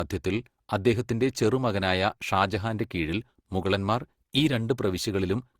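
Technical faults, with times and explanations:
Throughout, generation loss: the speech sounds swirly, smeared and hollow, with blurred attacks, likely from roughly seven passes through Opus near 64 kbit/s, each adding fresh quantisation noise. A spectrogram shows nothing above 20.2 kHz.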